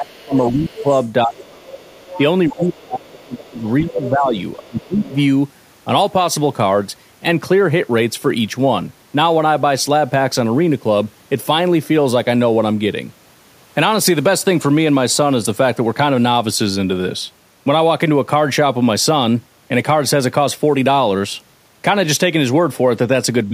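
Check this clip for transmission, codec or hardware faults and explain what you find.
Two faults are audible, both likely from the echo canceller on a speakerphone-style call: the talker's speech is pushed down while both sides talk, and the other side's voice leaks into the recording.

Speech suppressed in double talk occurs from 0.0 to 1.86 s, from 2.48 to 5.17 s, and from 23.46 s to the end. The near talker's level dips, with the deepest drops around 25 dB in the first two stretches and around 15 dB in the last. This is likely the canceller mistaking the talker for loudspeaker echo and attenuating everything. About a second of the first stretch, about two seconds of the second, and only tens of milliseconds at the end are affected. On a waveform the envelope sags or notches inside otherwise continuous speech, and a spectrogram shows the energy thinning out in those spans.

Other side's voice leaking through runs from 0.19 to 5.18 s, overlapping the first two suppressed stretches. 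A second voice sits about 15 dB below the main speech, likely loudspeaker output the canceller did not fully remove from the microphone. On a spectrogram it appears as a fainter, separate set of harmonics under the main voice. On the waveform it fills the gaps and dips with low-level activity instead of near silence.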